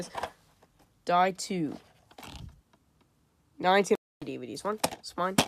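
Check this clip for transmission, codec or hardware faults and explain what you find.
One transmission fault stands out: a stream reconnect between 3.95 and 4.24 s. The sound drops out into silence for about 0.26 s, then picks up again roughly a fifth of a second further along than where it stopped, so a short stretch is skipped. The connection broke, the player fell silent while it reconnected, and a new decoder started partway through a live stream, which is why playback resumes ahead of the interruption.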